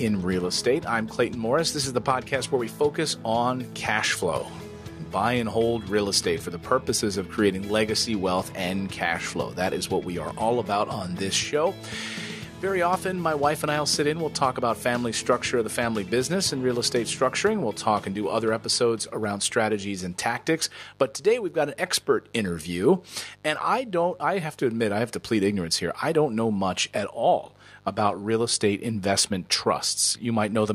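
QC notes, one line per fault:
throughout mains buzz: steady raspy buzz, roughly 30 dB under the sound, from switching spikes at 100 per second; spectrogram shows even horizontal lines every 50 Hz.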